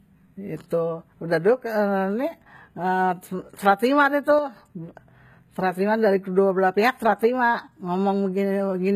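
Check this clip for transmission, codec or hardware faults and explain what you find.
Two faults are audible in this speech clip.

HE-AAC compression runs throughout. Nothing is present above 14.9 kHz. The damage is plainly audible. The likely cause is band replication: the treble is rebuilt from copied lower bands, so s sounds turn gritty and metallic. This fits a low bitrate near 20 kbps.

One channel drops out from 4.39 to 4.56 s. The level falls abruptly by about 6 dB for that stretch, then recovers. A stereo channel was likely lost briefly, so the mono sum carries only half the shared signal.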